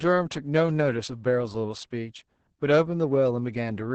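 Throughout, Opus voice compression in SILK mode leaves speech muffled and hoarse, fitting roughly 10 kbps; a spectrogram shows nothing above 8.5 kHz and smeared, coarse harmonics.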